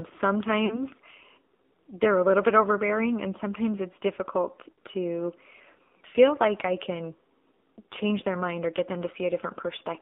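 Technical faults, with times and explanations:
Throughout: AMR narrowband mobile codec. The sound is confined to about 250 Hz to 3.6 kHz, with nothing reaching 4 kHz. Each frame is rebuilt from a vocal-tract model fed by sparse pulses, leaving a plainly audible buzzy, synthetic edge that fits the 7.4 kbps mode.
0.66–0.82 s, and 4.72–4.78 s just after "and sometimes it's difficult": lost AMR speech frames. The decoder repeats its last good pitch and vocal-tract settings at falling gain, so the sound smears and dips for 40 ms and then 60 ms, consistent with two and three missing frames.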